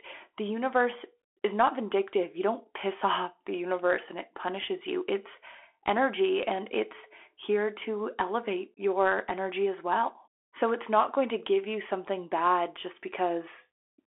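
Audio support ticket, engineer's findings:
Bluetooth CVSD headset codec, whole clip: one-bit slope coder, fits 64 kbps link. Band 300 Hz to 3.4 kHz; plainly audible codec damage, scratchy s sounds, granular hiss under speech.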